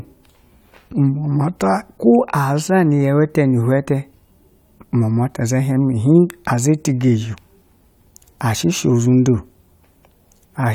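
No technical faults can be heard anywhere in the speech recording. Nothing along the signal chain draws attention to itself at any point.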